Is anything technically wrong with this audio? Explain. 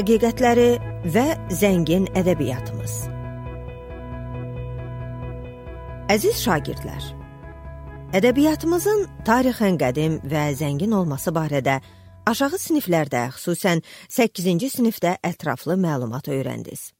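No, nothing technically wrong is audible anywhere in this audio.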